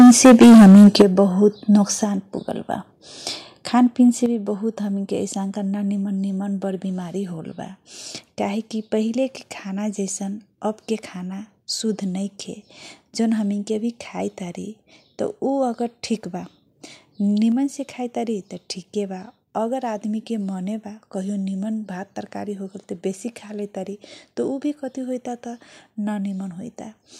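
Microphone overload fills the first 1.02 s of this speech clip. The loudest peaks run about 11 dB past the converter's limit, and roughly two-fifths of the samples are flattened at the limit, giving a harsh, crackling edge. The likely cause is an input set too high for the converter. Microphone volume stepped down follows at 1.02 s, then again at 2.04, 4.26 and 17.52 s. Voice and background drop together in abrupt steps of about 9, 4, 6 and 2 dB, most likely from the call software cutting the device's input volume after sensing overload.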